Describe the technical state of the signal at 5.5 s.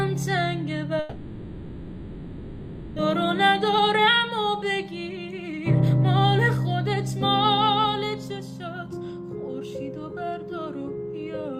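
At 5.5 s the audio is inside a jitter buffer speed-up running from 3.08 to 6.38 s. The receiver trims short pitch-period slices again and again, about a third of a second in total, so playback runs at 107% and sounds hurried. Unlike a resampling speed change, the pitch stays put.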